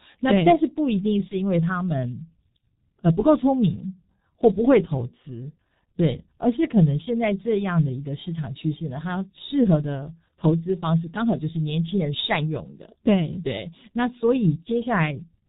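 Speech coded throughout with the G.723.1 codec at 6.3 kbit/s, and the damage is heavy. Nothing above 4 kHz survives, and the slowly updated vocal model leaves the voice muffled and hoarse, with consonants smeared into one another. At 1.28 to 1.35 s there is VoIP packet loss concealed by the speech codec. The gap fits a single lost 30 ms frame. The decoder extends the previous pitch and filter into a brief, fading stretch, and the voice stays weak or distorted as the following frames rebuild from that guess.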